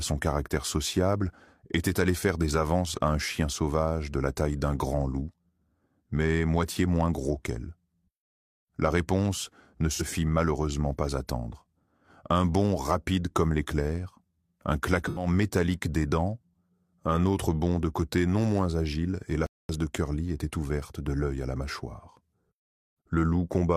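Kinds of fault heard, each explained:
AAC frame loss with concealment: at 9.94 s and 15.05 s, short gaps of 43 and 85 ms, fitting one and two lost frames, are patched from the last good spectrum, sounding briefly smeared.
Playback stall: at 19.46 s the sound drops out for 0.23 s, most likely because the player briefly ran out of data.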